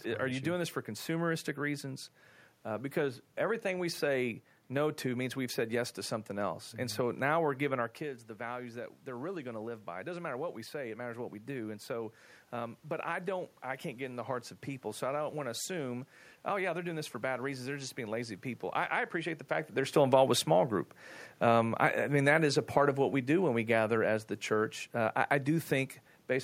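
DC offset runs through the whole recording. The entire waveform sits displaced from zero by a constant amount, so every positive and negative swing is measured from the wrong baseline. You cannot hear it as a tone. It appears as steady energy at the very bottom of the spectrum and eats into headroom, so peaks on one side reach full scale sooner than they should.

Automatic gain rising follows from 8.44 s to 18.44 s, beginning after "giving our kids the". Just before this, at roughly 8 s, the talker moves away from the microphone and the input drops by about 10 dB. The gain control sees a quiet signal and slowly raises its gain by about 7 dB over the next ten seconds. Voice and room noise swell together, so the background grows along with the talker. The gain never fully makes up the loss. The rise has finished by "I I appreciate the".

Automatic gain falling occurs from 19.95 s to 25.98 s, after "the fact that they're". 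Around 19.5 s the talker moves again, while the gain is still high from the previous boost. The control then pulls its gain down by about 5 dB over roughly six seconds, and the voice and room noise sink together.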